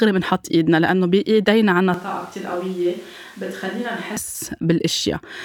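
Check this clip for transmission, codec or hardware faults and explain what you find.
One fault is present: a switch to a distant microphone from 1.94 s to 4.17 s. The speech turns roomy and hollow at once, loses bass, falls around 10 dB and carries room noise only about 25 dB below it, then snaps back. The likely cause is the close microphone dropping out, leaving a farther pickup.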